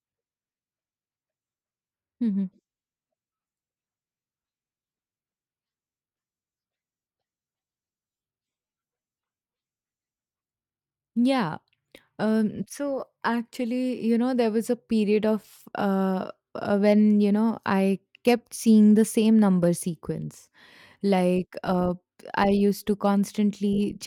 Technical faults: none

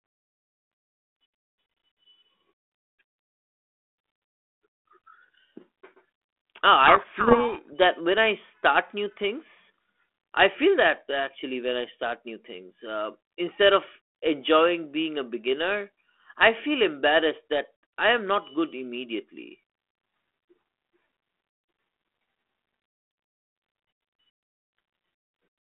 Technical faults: codec payload misread

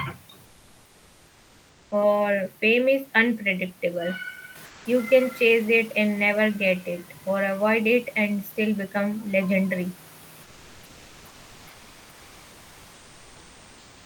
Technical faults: comfort noise in place of the background; sound dropped by the voice detector

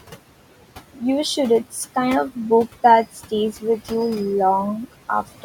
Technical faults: noise suppressor artifacts

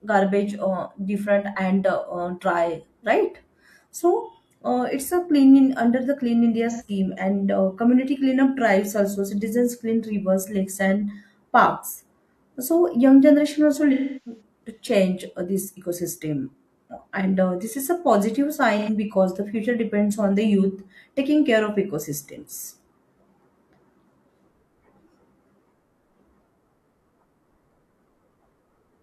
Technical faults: AAC frame loss with concealment

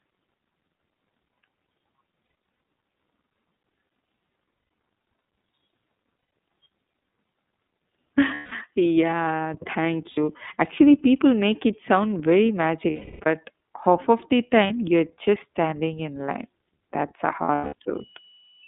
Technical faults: iLBC codec; lost iLBC frames

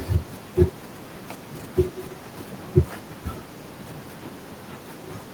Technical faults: none

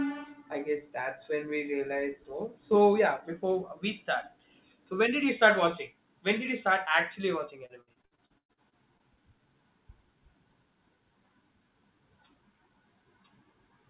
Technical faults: repeated packet loss (robotic sound)

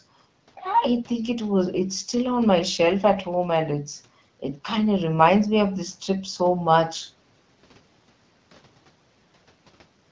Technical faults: none

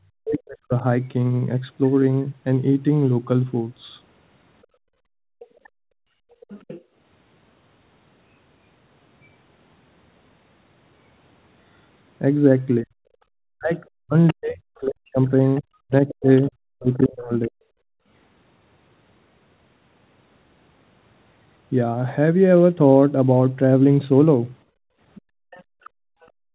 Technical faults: speech suppressed in double talk; background gated by the echo canceller; other side's voice leaking through

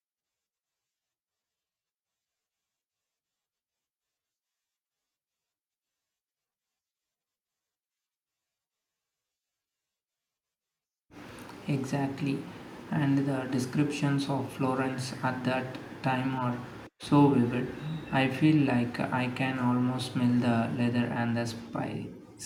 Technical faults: none

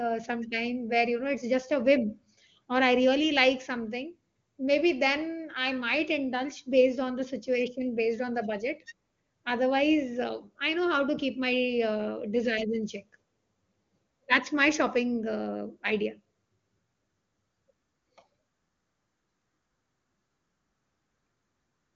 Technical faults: none

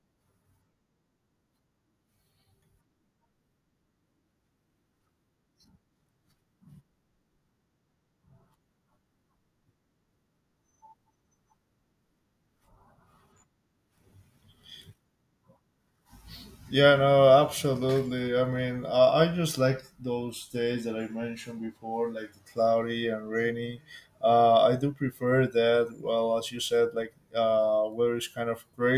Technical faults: none

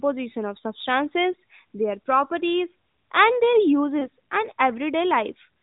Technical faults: lost AMR speech frames

